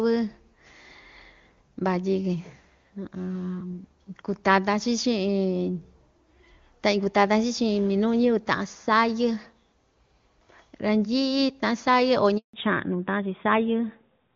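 Handover gap, 12.37 to 12.53 s: as the call switched networks, no speech frames arrived for 160 ms. The speech dies away within a few tens of milliseconds, leaving a hard silence, and whatever was spoken across that gap is lost.

Fallback to narrowband, from 12.53 s to the end: the call resumes on an older narrowband codec instead of the AMR wideband (HD Voice) codec heard before the gap. Nothing above 4 kHz survives, so the speech turns duller and rougher.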